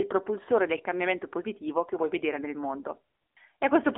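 Throughout, AMR narrowband mobile codec: the speech sits within 300 Hz to 3.6 kHz, and its audibly buzzy, synthetic coding fits a low mode near 8 kbps.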